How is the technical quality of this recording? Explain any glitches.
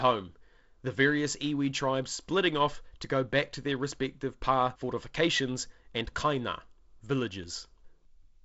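One glitch stands out: a single sharp tick at 7.44 s, broadband and unrelated to the speech around it. This is a bit error spike. One flipped bit in a single sample pushes its value off by a power of two, and the very next sample returns to normal.

The audio stops at 7.7 kHz, with a faint hiss in the upper band. That comes from G.722 wideband telephone coding, and the slightly noisier low band fits its 48 kbit/s mode.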